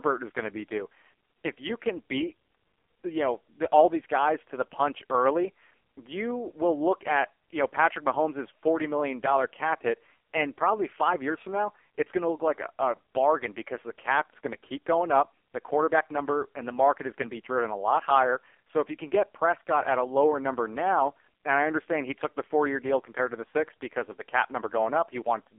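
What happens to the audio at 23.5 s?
At 23.5 s the speech is still under the AMR narrowband mobile codec that runs through the whole clip. Nothing above 3.4 kHz survives, and the band starts near 300 Hz. The vocal-tract model is starved of bits, which points to roughly 5 kbps. The result is a buzzy, synthetic voice.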